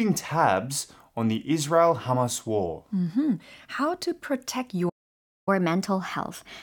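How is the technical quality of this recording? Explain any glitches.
The recording has two linked playback glitches near the end.

At 4.89 s, just after "to protect", the speech cuts to silence for about 0.58 s until 5.49 s. This playback stall is likely from the player running short of data or its thread being blocked, so output simply stopped mid-phrase before resuming.

From 5.49 s to the end of the clip, the speech runs at 1.1 times normal speed, with pitch raised by roughly a semitone and a half. This is catch-up at higher speed: the player resamples its backlog faster to recover the time lost during the stall, so the delivery sounds hurried and slightly higher.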